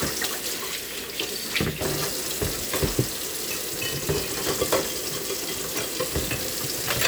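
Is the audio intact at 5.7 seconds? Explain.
Yes, at 5.7 seconds the sound runs intact, with no dropout, click, distortion or other fault to be heard at that point.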